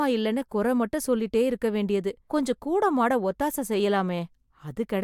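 No technical faults detected.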